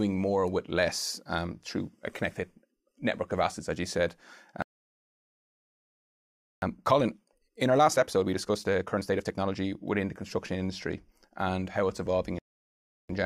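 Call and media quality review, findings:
Playback stall, 4.62–6.62 s: likely buffer underrun or blocked audio thread in the player; output drops to silence for 2 s mid-speech, then resumes.

Playback stall, 12.39–13.09 s: same probable component, same mechanism; speech cuts out for about 0.71 s before output recovers.

Time-compressed catch-up, 6.62–9.62 s: player draining backlog by splicing out short segments and cross-fading the joins; speech runs at 1.25x with pitch unchanged, hurried.

Time-compressed catch-up, 13.09 s to end: same backlog-trimming after the second stall, milder at 1.1x; slight rush, pitch held.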